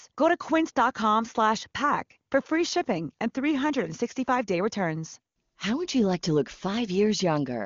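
Nothing goes wrong anywhere in this speech clip, and it simply sounds like an ordinary wideband HD Voice call, with any AMR-WB coding at most faintly audible, which fits the codec running at or near its top rate of about 24 kbit/s.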